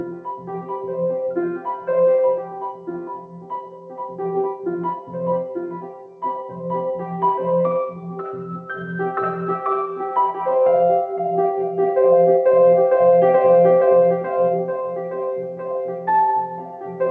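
From the start, a noise suppressor applied to music or sounds is at work. A processor tuned for speech treats steady, sustained material as background noise and pulls it down, so the level swings by around 10 dB as the suppressor clamps and releases. Unlike a compressor or limiter, it isn't reacting to loudness. It reacts to how steady the sound is, so onsets stay intact while held portions thin and flutter.

The clearest cases of sound cut by the noise suppressor fall at 0.18–0.5 s, 2.45–2.88 s, 3.18–4.2 s, 5.0–5.16 s, 5.81–6.22 s, 14.58–16.08 s and 16.5–17.01 s. Each dips by about 7 to 8 dB. The longest, around 3.2–4.2 s and 14.6–16.1 s, are sustained stretches that sink while their attacks survive. A dropout or packet loss would cut everything at once, including the transients. The call path shows no content above 8 kHz, which fits a G.722 wideband codec.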